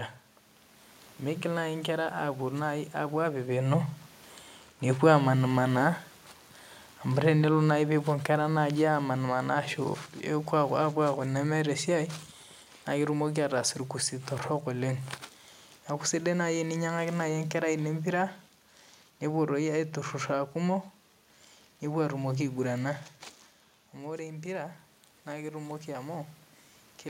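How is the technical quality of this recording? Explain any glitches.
One glitch stands out, a gain drop early in the recording. The steady room noise and the level shifts when the talker moves, early on and again near the end, belong to the recording itself.

Automatic gain falling, from 7.11 to 9.38 s. The automatic gain control judged the input too loud or its background noise too strong. It pulled its gain down slowly over about two seconds, by about 3 dB. The speech sinks a little, and the room noise sinks with it. That shared drop marks the processing, not the talker.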